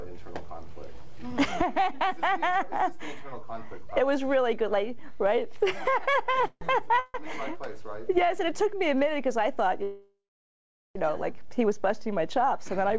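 Around 6.32 to 6.35 s and again at 6.41 to 6.45 s there are two short stalls from a late packet. Each time the jitter buffer ran dry for about 15 ms, so the receiver held the last sound a beat too long, giving a slight buzzy smear. Nothing drops out; everything just lands a hair later.

Right after that comes a call audio freeze from 6.47 to 6.63 s, another from 6.99 to 7.16 s, and a much longer one from 9.83 to 10.97 s. The likely cause is packets held up in transit until the buffer emptied. The receiver keeps the last sound going as a fading buzz, which dies to about 50 ms of silence in the first freeze, roughly 10 ms in the second, and nearly 0.8 s in the third. When the packets turn up, the audio picks up exactly where it left off, so each freeze adds a gap (around 140 ms, 150 ms and 1.1 s) without losing any content. The band tops out at 8 kHz, which points to G.722 at 64 kbps on the call path.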